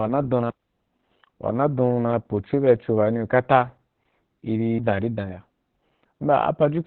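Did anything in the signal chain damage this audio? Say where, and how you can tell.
Yes, at the codec stage: Opus voice compression throughout. The speech is muffled, hoarse and slightly robotic, and its narrowband SILK coding fits a rate around 8 kbps.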